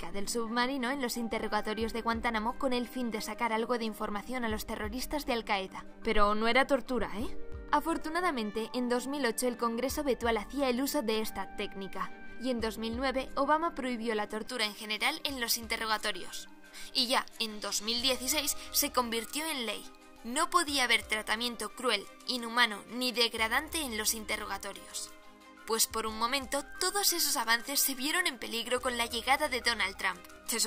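From 14.47 s to the end, pre-emphasis is left on. The treble boost fits a J.17 curve, but no matching de-emphasis follows. Highs sit about 11 dB above 1 kHz at 10 kHz. The sound turns thin, bright and sibilant.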